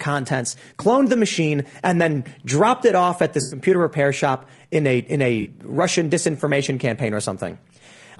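Throughout, the speech sounds rough and grainy, with noise filling the gaps between harmonics; this is likely low-delay AAC compression (AAC-ELD), consistent with roughly 32 kbps, showing as smeared harmonic lines on a spectrogram. From 3.41 to 3.59 s and again from 5.41 to 5.47 s, AAC frame loss with concealment produces brief smeared, phasey patches where the decoder repeats earlier spectra. On a spectrogram these appear as blurred blocks.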